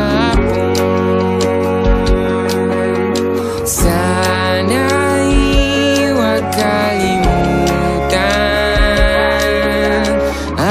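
No technical faults can be heard anywhere in the audio.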